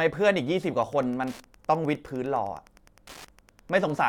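From 0.76 s to the end, Wi-Fi interference: the circuit rectifies radio beacons every 102.4 ms, giving faint, steady ticks rather than GSM buzz.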